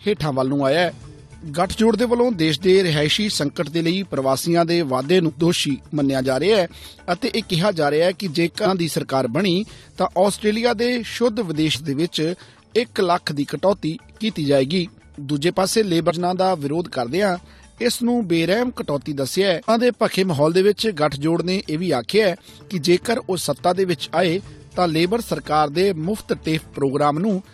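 Five brief glitches, each about 20 ms, break the sound at 5.28, 8.65, 11.74, 16.09 and 19.68 s. This is damaged data in a compressed stream: corrupted bytes make the decoder misread frames, lose sync and resume at the next header.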